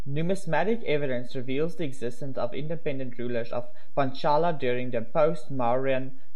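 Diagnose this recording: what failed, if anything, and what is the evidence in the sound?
A DC offset runs through the whole recording, a constant shift of about -24 dBFS that points to the converter or its analogue input stage. It is inaudible as such, unlike mains hum, which sits at a pitch. The evidence is steady energy at 0 Hz and lost headroom.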